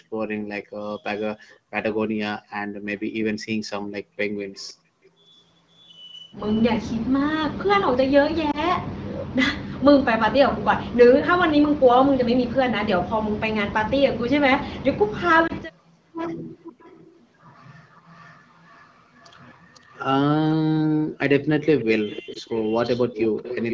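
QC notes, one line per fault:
1.50–1.56, 4.53–5.10, 16.64–17.55, 17.91–20.00, 21.79–23.74: echo leak. A delayed copy of the speech trails the original by about 505 ms. It ranges from barely audible (about 40 dB down) to fairly prominent near the end (about 15 dB down). This is likely far-end loudspeaker pickup that the echo canceller did not fully remove.
8.51–8.59, 15.47–15.51, 22.33–22.38: lost AMR speech frames. Each is a brief dip or warble consistent with a single 20 ms frame concealed by the decoder. It reuses the previous pitch and spectral settings at reduced gain, then recovers with momentary roughness.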